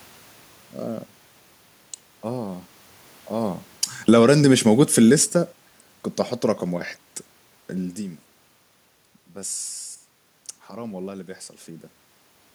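A speech recording where the automatic gain falls between 3.33 and 5.67 s. The AGC found the input too loud, or its background noise too strong, and pulled its gain down by about 9 dB over those couple of seconds, so the voice and the room noise behind it sink together. That shared drop is the giveaway. The talker also shifts position around 3.5 s and again near 7.5 s, but those are natural level changes at the mic, not the gain ride.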